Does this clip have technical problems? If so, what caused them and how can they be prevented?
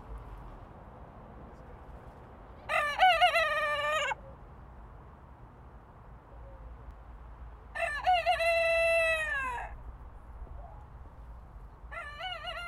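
Yes. There are two small jumps in the sound, at 4.21 s and 6.91 s. No gap of silence comes with either one. The audio simply skips forward, by roughly 20 ms at the first point and about 10 ms at the second. This likely comes from a dropped buffer (overrun). The recording program failed to read its samples before the hardware overwrote them. The lost piece vanished, and the audio on either side was joined directly. To prevent it, use a larger capture buffer and give the recording thread higher priority so it never falls behind.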